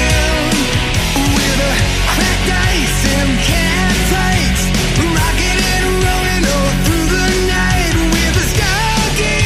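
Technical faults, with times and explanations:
No technical faults can be heard in this clip.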